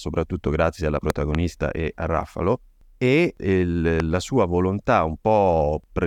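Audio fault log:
1.10–1.37 s and 4.00–4.02 s, loud pop: a sharp double pop breaks in after "grazie alla" and before "e a", and a single pop lands just before "la sua volontà". Each peaks around 15 dB above the speech, which carries on underneath. The likely cause is a sudden step or spike of voltage from a plug, a switch, static discharge or a driver glitch. It is added to the signal and briefly shaped by the circuits after it, giving a hard transient instead of a clean tone.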